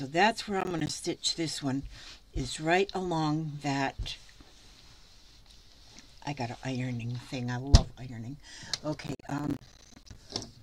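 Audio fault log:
0.61–0.94 s, processor overload crackle: the processor misses a string of buffer deadlines, leaving hard-edged silent gaps that fit buffers of around 10 ms, heard together as gritty crackle.
9.03–10.16 s, processor overload crackle: a longer run of missed deadlines tears the sound with many more of the same silent holes.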